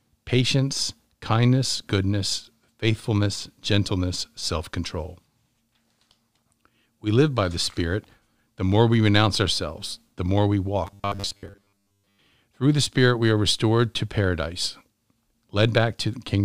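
Robotic sound from repeated short buffers runs from 10.87 to 12.20 s, just after "ourselves the more we". The speech becomes a rigid, metallic buzz at 100 Hz, most likely because delayed audio forced the software to loop a 10 ms fragment, skipping much of the real signal.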